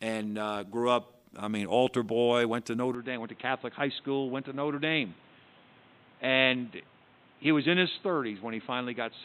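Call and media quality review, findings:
Speech turns dull and boxy from 2.95 s to the end, nothing above 4 kHz, slightly quieter, new background noise. Likely input switched to a poorer device.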